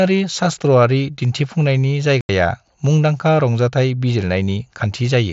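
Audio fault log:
2.21–2.29 s, unconcealed Bluetooth headset packet loss: the sound drops out abruptly for about 82.5 ms, just before "मुंदांखा रंजाथाय". A run of headset voice packets between earpiece and phone never arrived. Nothing was patched in to cover them, so silence or an idle pattern filled the gap. The length points to roughly eleven consecutive lost packets on the wideband mSBC link, whose light codec grain continues on either side.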